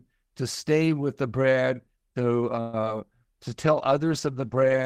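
Just after "with the brand to", at 2.60 s, the speech stalls for about 130 ms in a call audio freeze. The last sound carries on as a fading buzz or hiss, likely from delayed packets draining the jitter buffer, then resumes intact.

Short concealed packet loss follows at 2.81 to 2.83 s and again at 2.84 s. Missing fragments are patched by extending the preceding sound, giving brief smears.

From 3.51 s to the end, a call bitrate drop from 32 to 18 kbps makes the speech coarser and rougher.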